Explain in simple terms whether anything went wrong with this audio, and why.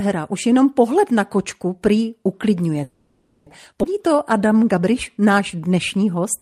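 Right after "na kočku prý uklidňuje", from 2.83 to 3.48 s, the speech stops and a fading buzz or hiss fills about 0.63 s. That is a call audio freeze, likely from delayed packets leaving the receiver's buffer empty.

At 3.82 to 3.85 s the speech jumps forward abruptly, losing about a third of a second. This skip ahead happened because a stretch of audio was dropped while later audio was already waiting.

From 4.0 to 6.2 s the speech drags at about 92% speed, with the pitch unchanged. In this jitter buffer slow-down, tiny pieces were repeated to add 0.18 s of reserve.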